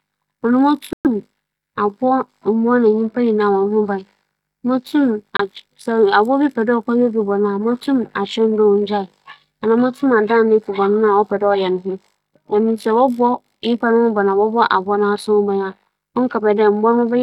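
At 0.93 s and again at 5.37 s the speech cuts to clean silence, for about 118 ms and then 26 ms, and then resumes. This is a Bluetooth stall, likely from interference delaying packets until the headphones' buffer ran dry.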